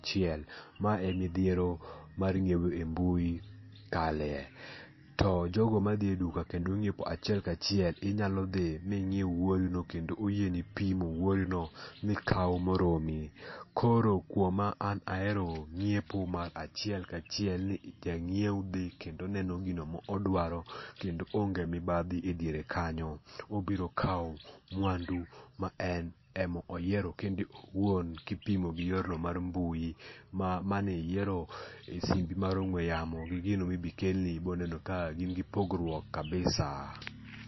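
Speech with plainly audible MP3 compression throughout, likely from a low bitrate near 26 kbps. Nothing remains above 5.8 kHz. Weak frequency lines flicker, giving a watery, swirly texture.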